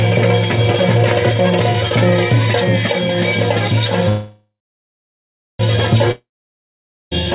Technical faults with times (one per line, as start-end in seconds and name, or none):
1.11-1.27 loud pop
4.09-5.61 call audio freeze
6.11-7.25 long network dropout